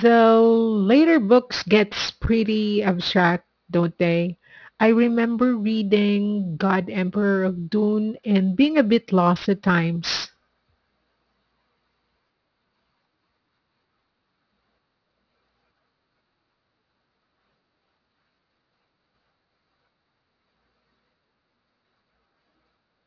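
Aliasing runs through the whole clip: the audio was resampled down without an anti-aliasing filter, consistent with a drop to about 11 kHz. Content above 5.5 kHz folds back below it, about 20 dB under the speech, making sibilants gritty and metallic.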